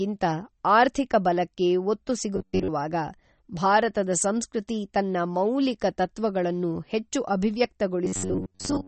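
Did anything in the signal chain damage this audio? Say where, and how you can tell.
Yes. Codec stage: the treble is missing above 8.4 kHz throughout, with watery, swirling detail, likely from MP3 encoding at a low bitrate around 32 kbps. The swirl distinguishes it from a plain low-pass filter.

Driver or buffer stage: from 2.36 to 2.68 s and from 8.05 to 8.87 s the sound becomes a rigid 93.8 Hz buzz. This is likely robotic sound from repeated short buffers, about 10.7 ms long, replacing most of the real audio. The fixed pitch distinguishes it from codec swirl.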